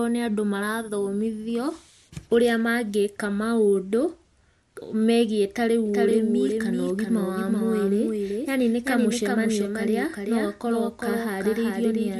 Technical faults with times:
5.86-12.20 doubled audio track

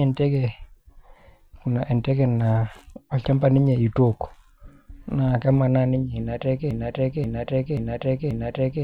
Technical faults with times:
6.71-8.83 broken-record loop

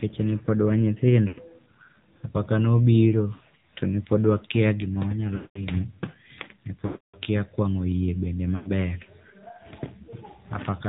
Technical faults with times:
0.00-10.89 AMR narrowband mobile codec
1.28-1.42 lost AMR speech frames
3.34-3.41 lost AMR speech frames
5.36-5.61 lost AMR speech frames
6.86-7.17 lost AMR speech frames
8.56-8.71 lost AMR speech frames

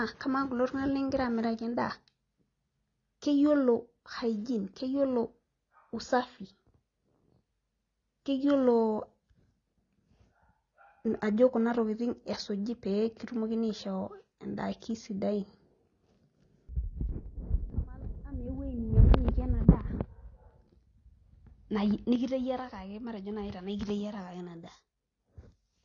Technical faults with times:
0.00-25.84 AAC compression
6.21-6.39 one channel drops out
22.16-25.84 one channel drops out

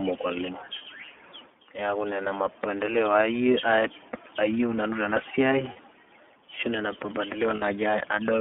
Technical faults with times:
0.00-8.41 iLBC codec
0.78-0.82 lost iLBC frames
5.73-5.77 lost iLBC frames
7.56-7.63 lost iLBC frames

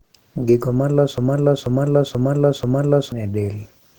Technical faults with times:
0.00-3.99 Opus compression
1.18-3.12 broken-record loop

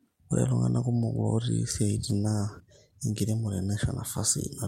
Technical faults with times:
2.08-3.17 call bitrate drop

